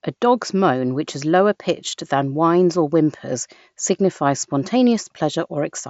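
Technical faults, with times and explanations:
The speech carries the wideband sound of a Bluetooth mSBC headset codec working as intended, with content reaching up to about 7.7 kHz and nothing above it, and only a light, faint graininess on the louder moments.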